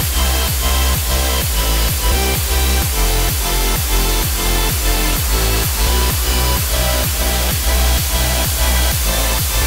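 From the first moment to the last, the whole clip sits under a thick, steady hiss. That's low bit depth with dither: the audio has been squeezed down to just 3 bits, and dither was added before rounding, so instead of gritty distortion the rounding error turns into even white noise. With so few levels that hiss ends up nearly as loud as the sound itself, but it stays smooth and constant rather than crunchy.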